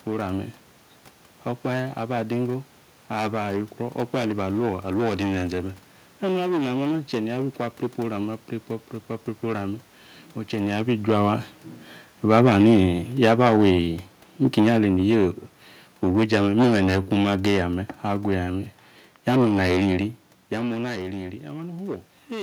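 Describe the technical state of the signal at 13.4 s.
Automatic gain falling is under way at 13.4 s, within a stretch running from 11.07 to 17.74 s. The gain control judged the incoming level too high, or the background noise too strong, and is easing its gain down gradually, by about 6 dB over that span. At 13.4 s the speech is partway through this slow slide, quieter than at 11.07 s and still sinking, and the room noise beneath it drops by the same amount, which marks the change as a gain adjustment.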